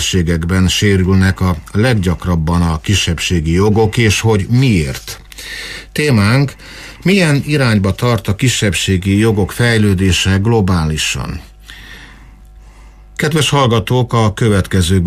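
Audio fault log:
No technical faults can be heard anywhere in the signal.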